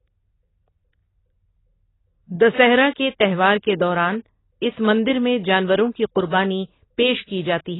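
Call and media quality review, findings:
Likely AAC compression (AAC-LC) at a very low bitrate, for the whole speech clip. Coarse quantisation and bandwidth cut at 3.9 kHz, nothing above. Heavy damage: speech dull, muffled, smeared, with warbling, fizzy sibilants.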